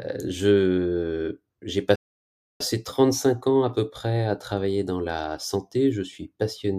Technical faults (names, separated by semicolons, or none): playback stall